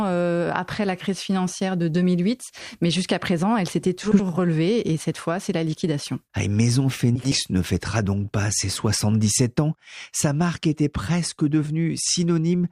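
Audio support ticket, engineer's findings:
Frames out of order at 4.03–4.22 s (after "jusqu'à présent elle s'était", before "relevée et cette fois") and 7.16–7.36 s (before "ne fêtera donc pas"). Garbled flutter. Packet reordering swapped two adjacent 80 ms blocks, each fitting about four frames. No time lost.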